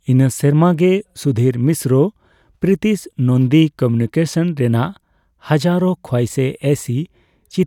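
No technical faults can be heard anywhere in the recording.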